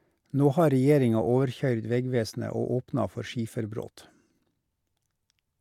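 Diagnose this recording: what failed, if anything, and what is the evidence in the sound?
No fault at any stage.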